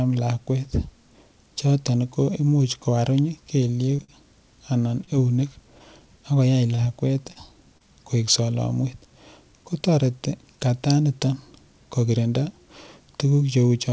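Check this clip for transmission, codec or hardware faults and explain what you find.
There is one transmission fault in this speech clip: scattered short gaps between 3.68 and 7.83 s. Around seven brief dropouts fall across that stretch, the longest about 40 ms. Lost or late packets left holes, and the receiver filled each by extending the preceding sound. Roughly 200 ms in total was concealed, about 5% of the span, with net timing shifted as 120 ms went missing and 20 ms was added. This is heard as small ticks, smears and hiccups. On a waveform, the patches look like short repeated or stretched cycles. On a spectrogram, they appear as thin, unnaturally steady vertical slivers. The call path itself, with energy stopping at 8 kHz, fits wideband G.722 at 64 kbps.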